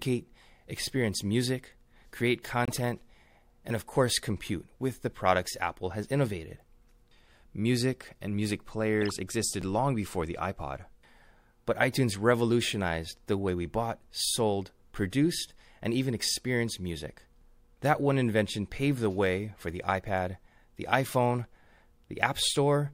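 Speech with corrupt frames decoded at 2.65–2.79 s and 9.02–9.14 s. Damaged compressed frames played anyway, producing brief chirps of misplaced energy.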